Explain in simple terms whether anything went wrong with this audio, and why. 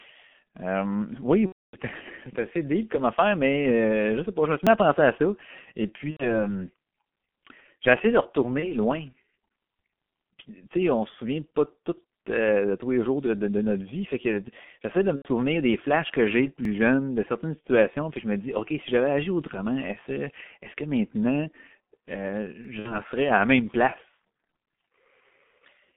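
Three problems can be heard in this speech.

The whole recording has passed through the G.723.1 codec, an old internet-phone format that squeezes speech very hard. Only the range from about 150 Hz to 3.4 kHz survives, so the sound is muffled and thin. The heavy compression also makes the voice hoarse and grainy, and consonants come out smeared because the codec rebuilds the voice in coarse 30 ms steps.

There are six spots of VoIP packet loss concealed by the speech codec: 1.46–1.77 s, 6.11–6.29 s, 8.60–8.75 s, 15.16–15.28 s, at 17.67 s, and 22.79–22.99 s. At each one, pieces of the call never arrived, and the decoder filled the hole by stretching what it had just played. That filler sounds like a brief buzzy or hissy smear that fades out. The longest, near 1.5 s, replaces about 270 ms. The one at 15.2 s falls between "que j'essaie de me" and "des flashs que j'ai". The one at 17.67 s falls between "jeune de certaines" and "puis je me dis".

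There are also four tiny skips, at 4.67 s, 10.66 s (just before "sais on se souvient"), 16.65 s and 22.65 s. They are spaced about 6 seconds apart and each drops roughly 7 ms of sound, which is heard as a small jump. The regular spacing points to audio missing between chunks, likely because the recorder saved in 6-second pieces and lost a sliver at each join.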